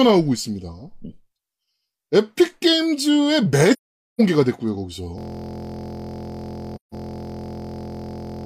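From 3.73 to 4.21 s there's AAC frame loss with muting: about half a second of decoded spectrum zeroed, so the speech fades into a soft hole. Then at 5.18 s a system hang loop takes over to the end, cycling a 23.2 ms chunk (consistent with a 1024-sample buffer) into a steady 43 Hz buzz. A second muted AAC gap follows from 6.75 to 6.94 s.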